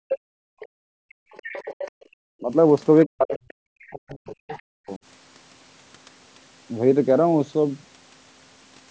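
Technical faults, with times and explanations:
0.0–0.1 s, 2.4–2.52 s and 3.06–4.99 s: speech suppressed in double talk. The talker's speech dips sharply, by roughly 40 dB at the first and last points and around 15 dB at 2.4 s. The last stretch is the longest, with about one and a half seconds affected. Both sides were likely talking at once, so the echo canceller could not tell the near voice from the loudspeaker echo and pulled everything down.
0.1–1.91 s, 3.03–3.91 s and 4.49–4.62 s: other side's voice leaking through. A second voice sits under the main speech. It is roughly 15 dB below the talker in the first stretch, and fainter later, around 25 dB down. This is likely loudspeaker sound that the echo canceller failed to remove from the microphone.
0.38–1.31 s and 1.91–2.12 s: background gated by the echo canceller. The room sound drops away by about 40 dB, for roughly 0.7 s in the first stretch and 0.2 s in the second. 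It returns afterwards. The canceller clamped the microphone hard while the loudspeaker played and then released it.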